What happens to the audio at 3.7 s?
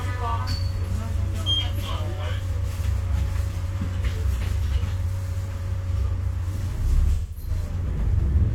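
Nothing goes wrong at 3.7 s; the audio plays through that moment intact, with no dropout, click or distortion.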